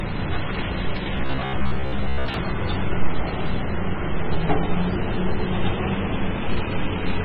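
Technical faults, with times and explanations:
Throughout: MP3 compression. The damage is heavy. The sound has a watery, swirling texture, and faint detail flickers in and out. Attacks sound smeared rather than crisp. The likely cause is an MP3 encoder starved of bits. At a very low bitrate, around 15 kbps, it zeroes weak components that come and go between frames.
1.17 to 2.34 s: Robotic sound from repeated short buffers. For this stretch the sound turns into a rigid, metallic buzz at 66.8 Hz. It still loosely follows the shape of the underlying audio. About half of what is heard here is repetition rather than fresh audio. New audio likely arrived too seldom, so the playback repeated the last short chunk to fill the gap. A fixed repeat every 15 ms or so forces that steady buzz pitch.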